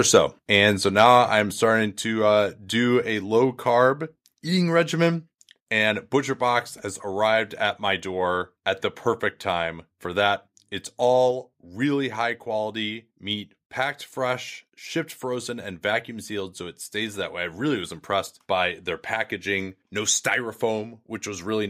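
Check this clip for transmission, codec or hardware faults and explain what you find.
Two faults are audible in this speech recording: clipped peaks near the start, followed by several sudden drops in level.

From 0.15 to 0.18 s and from 0.99 to 1.15 s, just before "I'm starting", the loudest peaks take on a harsh, crackly edge, about 1 dB and then about 4 dB over the converter's limit. This is likely microphone overload, where the input level is set so high that a small share of samples have their tops flattened at the converter's limit.

At 1.02 s, 2.04 s and 11.31 s, the last just before "really high quality meat", the voice and background both drop abruptly by about 2 dB. This points to the microphone volume being stepped down by the call software after it detected clipping or excessive level.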